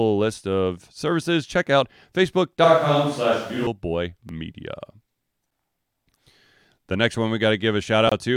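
At 2.64 s the speech suddenly turns roomy and hollow, with thinner bass and room noise rising to roughly 25 dB below the voice; at 3.67 s it snaps back. This is likely a switch to a distant microphone, the close mic's signal lost for that second. Level stays about the same, so it isn't a dropout or gain fault, and the abrupt change at both edges, not a gradual drift, separates it from added reverb or a low-cut filter.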